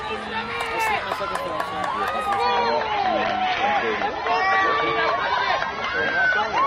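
At 2.42 s the adaptive stream drops to a lower bitrate, which fits a 24 kbit/s AAC rendition. Everything above 6.3 kHz vanishes abruptly, with no gap, until the end.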